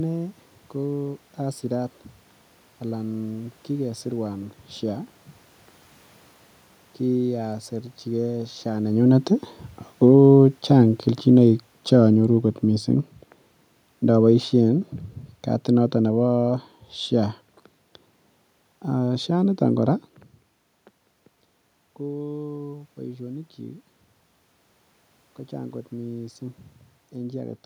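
Automatic gain falling affects this speech clip. The automatic gain control judged the input too loud or its background noise too strong and pulled its gain down gradually, by about 10 dB from 7.03 s to 19.6 s. The voice starts loud and then sinks steadily, with the room noise behind it dropping by the same amount. That shared drop separates it from the talker's own movements, around 8.5 s and again near 20 s, which change only the voice's level.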